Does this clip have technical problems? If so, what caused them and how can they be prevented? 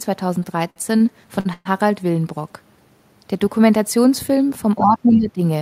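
Yes. Between 0.43 and 1.02 s the speech shows repeated stalls (stutter): four separate holds, together about 106 ms, the longest 58 ms, so roughly 18% of that stretch is filled-in sound. Packets kept reaching the receiver late, its jitter buffer emptied each time, and it extended the last sound until audio resumed, so nothing is lost but the flow drags. What sets this apart from a single stall is the cluster of small catches in quick succession. A larger adaptive jitter buffer and a steadier network path prevent it.

At 1.40 to 1.47 s there is a short stall from a late packet: one sound is held for about 52 ms too long, then the speech carries on from exactly where it paused. One packet missed its slot, the buffer ran dry and the receiver stretched the preceding audio instead of dropping anything. Unlike the stutter, it is one isolated hold. More jitter-buffer headroom prevents it.

From 1.53 to 1.67 s comes a call audio freeze. 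The last sound is carried on for about 120 ms, fading, and ends in roughly 20 ms of silence before speech picks up where it stopped. The likely cause is packets held up in transit long enough that concealment ran out and faded away. That fade into silence is what distinguishes it from the shorter stalls before it. Reducing network congestion and buffering more deeply prevents it.

From 4.78 to 5.41 s there is speech suppressed in double talk: the voice dips by about 10 dB, over roughly half a second in total. The likely cause is the echo canceller turning everything down while both sides spoke, unable to tell the talker from the loudspeaker echo. A drop in level tied to overlapping talk, not a pause in time, marks it apart from the stalls. A better double-talk detector in the echo canceller prevents it.

At 5.12 to 5.17 s, inside that dip, the other side's voice is leaking through: a brief scrap at about 20 dB below the main speech. 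Its likely cause is residual echo that the canceller failed to remove from the loudspeaker playback. Unlike suppression, this adds a second voice instead of weakening the first. A headset, or stronger echo cancellation, prevents it.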